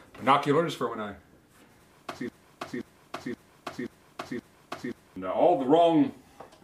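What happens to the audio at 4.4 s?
At 4.4 s you're inside a broken-record loop, running 2.29 to 5.16 s. One 0.53 s fragment repeats exactly, five times back to back. Likely the player or stream stalled and kept resending its last fragment, so the audio meant for that stretch is lost.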